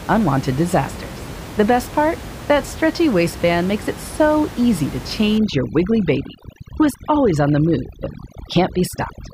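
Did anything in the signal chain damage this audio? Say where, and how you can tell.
Yes. From 5.38 s, right after "it so easy to", through to the end at 9.33 s, you get overdone noise removal, which belongs in the call-processing stage. The room noise, sitting about 14 dB under the speech, drops and breaks up into little twinkling, warbling specks. That's a suppressor pushed too hard: it's killing individual frequency bands near its noise estimate and dragging the quieter parts of the voice out along with them.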